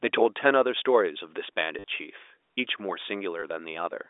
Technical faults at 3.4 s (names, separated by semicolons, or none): packet loss with last packet repeated